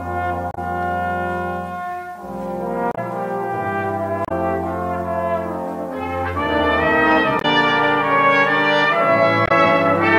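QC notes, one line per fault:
0.51–0.58 s, 2.91–2.98 s, 4.25–4.32 s, 7.38–7.45 s and 9.45–9.52 s: damaged data in a compressed stream. At five points, part of the encoded stream was corrupted, so the decoder could not read those frames correctly and lost sync until it found a valid frame header again. Each event lasts about 0.07 s and is heard as a brief disruption, a chirp, squawk, click or short hole, where the audio briefly breaks before resuming.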